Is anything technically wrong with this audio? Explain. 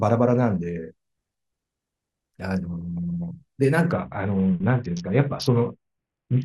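Yes. From 3.92 s to the end, a Bluetooth SBC bit pool drop starves the upper sub-bands, fitting roughly 60 kbps. The speech dulls and turns gritty, with emptied treble and speckled noise on a spectrogram.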